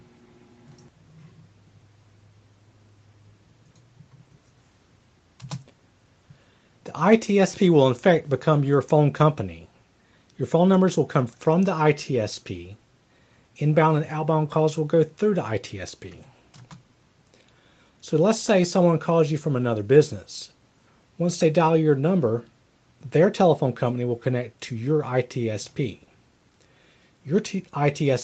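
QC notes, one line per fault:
No faults found.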